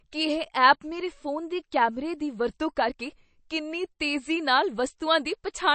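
It's a speech clip, and the whole thing has that watery, swirly quality of likely MP3 compression: nothing above 8.3 kHz, so the top end sounds dull, and the damage is plainly audible, which fits a low bitrate around 35 kbps.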